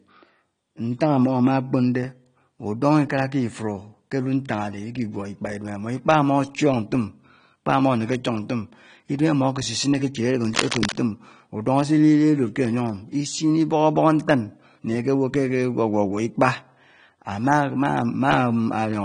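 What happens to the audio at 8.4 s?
At 8.4 s the speech has the same dull, swirly texture heard throughout, with nothing above 10.1 kHz, most likely AAC compression at a low rate such as 32 kbps.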